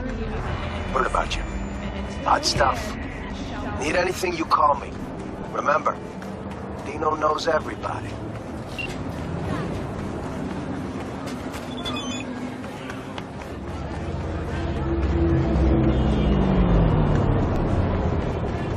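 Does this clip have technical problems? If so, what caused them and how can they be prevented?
Yes: an overlap between stream segments drops about 6 ms of sound at 5.59 s and 17.56 s, at boundaries of 6-second segments. Each drop is heard as a tiny skip and shows as a sudden step in the waveform and a thin vertical broadband line on a spectrogram. To prevent it, stamp segments from one continuous clock so neighbouring segments never claim the same time range.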